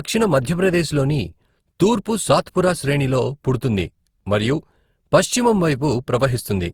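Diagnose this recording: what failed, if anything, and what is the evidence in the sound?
Throughout, the speech sounds swirly, hollow and smeared, attacks blurred: codec-stage generation loss, likely roughly seven Opus re-encodes, each adding fresh quantisation errors.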